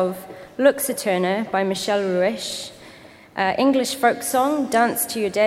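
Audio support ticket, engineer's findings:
Nothing to flag on this one, no faults turned up anywhere in the clip on a full listen.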